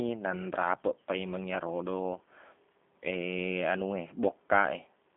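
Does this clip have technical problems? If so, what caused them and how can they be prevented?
Yes. Throughout, the speech went through a G.729 codec, which rebuilds each 10 ms frame from a vocal tract filter, a pitch predictor and a few pulses. This fits an 8 kbit/s VoIP link. The band spans 200 Hz to 3.5 kHz, nothing above 3.6 kHz survives, and the speech sounds plainly rough and synthetic. Routing the call through a wideband codec such as G.722 or Opus at a higher bitrate would prevent this.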